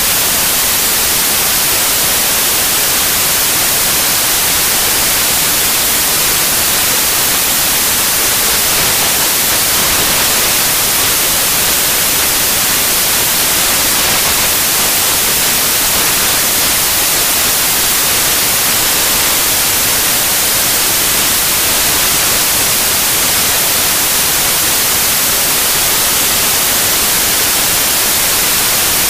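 From start to finish, the samples are built from the wrong bytes. Each sample's bytes are misassembled. The rapidly changing low-order bits end up as the largest part of each value. The result is loud, harsh broadband noise throughout, close to white on the loud passages.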